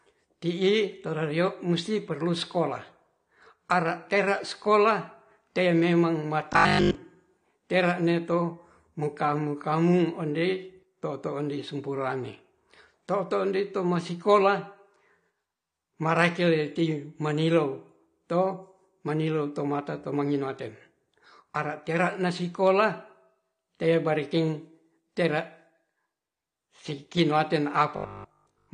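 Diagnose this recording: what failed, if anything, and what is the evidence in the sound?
The codec stage is the first problem. Throughout the speech nothing comes through above about 9.8 kHz, and the audible damage is plain: the top end is dull, with a smeared, fizzy edge on sibilants. That's likely AAC compression, and the sound fits AAC-LC at a low bitrate around 32 kbps. The encoder doesn't have enough bits to go round, so it drops the highs and quantises the rest coarsely.

There's also a buffer or driver fault, at 6.53 to 6.95 s and again at 27.96 to 28.72 s. In both stretches the speech turns into a rigid metallic buzz pitched at 50 Hz while still loosely tracking the talking. That's the robotic sound from repeated short buffers, likely caused by audio arriving late so the last 20 ms chunk gets replayed over and over. A 50 Hz buzz means a 20 ms repeat. Most of the real audio in those stretches is skipped.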